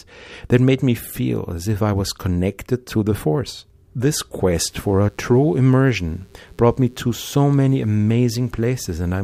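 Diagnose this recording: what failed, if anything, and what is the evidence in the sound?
Mains buzz enters at the analogue wiring from 4.50 s onward: a faint, raspy 60 Hz buzz whose switching-spike harmonics reach several kHz, unlike smooth, pure-tone hum.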